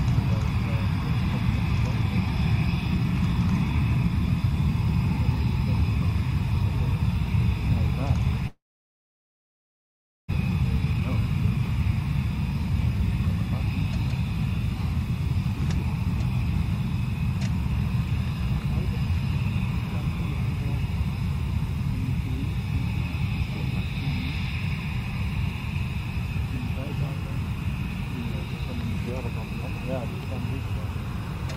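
From 8.47 to 10.34 s the sound carries on as a fading buzz, then drops to near silence for most of that stretch before resuming with about 1.6 s of material gone. This is likely a long network dropout. On a spectrogram it shows as a smeared, decaying copy of the last spectrum followed by an almost empty band. A jitter buffer speed-up follows as the receiver drains the backlog that built up, roughly a fifth of a second, by cutting out pitch-period-length slices. From 10.64 to 11.58 s playback runs at 111%, removing roughly a tenth of a second. From 12.51 to 13.42 s it runs at 103%, removing a few hundredths. The first stretch sounds hurried with unchanged pitch. A spectrogram shows harmonics at the same heights but events packed closer together in time, and the waveform shows small splices.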